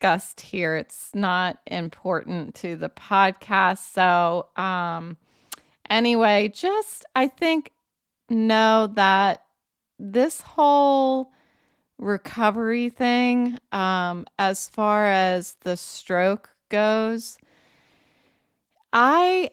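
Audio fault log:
No fault to log.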